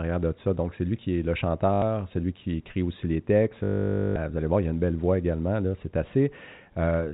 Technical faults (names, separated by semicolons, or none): packet loss with last packet repeated